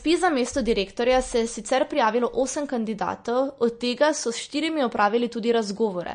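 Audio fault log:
Throughout: MP3 compression. Nothing is present above 9.6 kHz, and the speech carries a plainly audible watery, swirling texture, with sibilants turning metallic and consonant onsets smeared. These are likely the result of MP3 encoding at a low bitrate, around 40 kbps. Short of bits, the encoder applies a fixed treble cut and zeroes weak frequency lines. Those lines flicker on and off between frames, producing the swirl.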